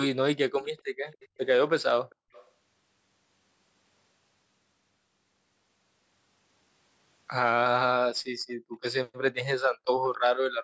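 Echo leak appears first at 0.61 to 0.82 s, again at 1.09 to 1.28 s, briefly at 2.1 to 2.15 s, and at 2.32 to 2.51 s. Each time a faint, delayed copy of the speech trails the original by 274 ms, somewhere around 25 to 35 dB below it. The likely cause is a far end on loudspeaker whose echo canceller failed to remove everything its microphone picked up, so the leftover was sent back.

Background gated by the echo canceller follows at 8.3 to 8.38 s, 8.56 to 8.72 s and 9.73 to 9.87 s. The room sound falls away by about 40 dB for under a fifth of a second each time, then returns. The canceller clamped the microphone hard while its loudspeaker played, silencing the ambience along with any echo. The call's microphone processing also leaves nothing above 8 kHz.

Echo leak returns at 10.04 to 10.18 s, with the same faint copy of the speech delayed by 274 ms.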